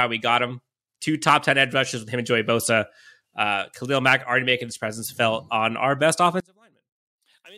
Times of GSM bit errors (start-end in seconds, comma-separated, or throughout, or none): none